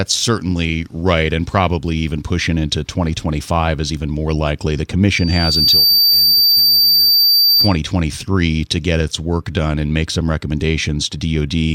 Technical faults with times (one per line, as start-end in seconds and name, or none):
5.11-7.78 loudspeaker feedback squeal